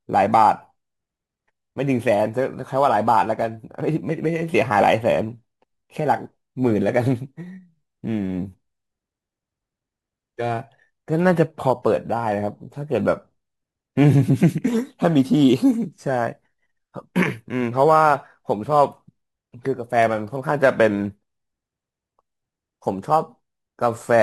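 Throughout the recording, the speech was converted from one sample rate to another without any filtering, simply by repeating the nearest existing sample where a new one was needed. The pattern of repeats points to a step from 44.1 kHz up to 48 kHz. This crude rate conversion leaves an error sitting roughly 30 dB below the speech, heard as a gritty, inharmonic fizz that clings to the louder and brighter sounds.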